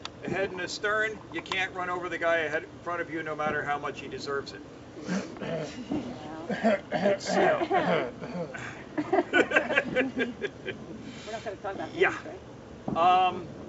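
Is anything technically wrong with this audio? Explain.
No, nothing is technically wrong: the audio has come through a call path with a band limit at 8 kHz, which fits a wideband codec such as G.722 at 64 kbps, and nothing in it departs from that path's normal behaviour.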